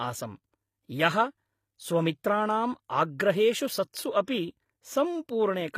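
Across the whole speech clip, the top end sounds synthetic. Nothing reaches above 15.5 kHz. The damage is plainly audible, and the likely cause is HE-AAC compression at a low rate, something near 24 kbps. Only the lower spectrum is truly coded. The treble is rebuilt by copying lower bands upward under a coarse envelope. So the highs stay bright but are not real. Harmonics fail to line up where the copied band begins, and sibilants turn gritty and metallic.

At 3.92 s there is pre-echo. A short hiss arrives just before a sharp attack, spread over about 18 ms. The codec spread its quantisation noise across a whole block, sized for the loud onset. That noise leaked into the quiet gap ahead of it. The attack loses its crisp edge and sounds smeared.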